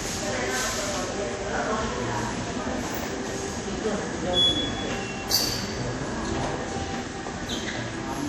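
Throughout, the sound carries plainly audible WMA compression damage, likely from a low-rate Windows Media Audio encode around 48 kbps. Coarse quantisation smears ringing, washy noise around transients and leaves hiss breathing with the signal. A spectrogram shows nothing above 17.7 kHz, with speckled, gappy upper bands.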